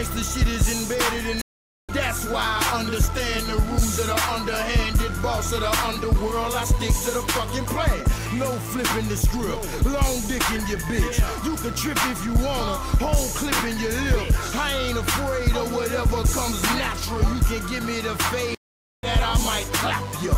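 Twice the audio drops out for about half a second and then picks up further along, with a small stretch of material skipped. The gaps run from 1.41 to 1.91 s and from 18.55 to 19.07 s. Each is a stream reconnect: the connection broke, playback went silent while the player re-established the link, and a fresh decoder started mid-stream at the live position. Roughly 0.4 s and 0.5 s of content were lost.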